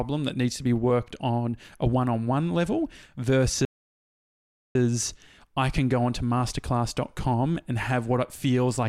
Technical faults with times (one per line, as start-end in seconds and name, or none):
3.65-4.75 playback stall